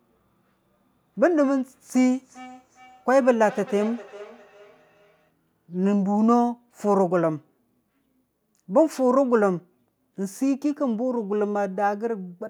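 From 1.94 s to 5.32 s, feedback echo between two devices: a second device replays the speech and the microphone recaptures it, beyond the echo canceller's reach. Repeats arrive roughly 0.4 s apart, about 19 dB below the speech, appearing as fainter, time-shifted copies of the harmonic bands.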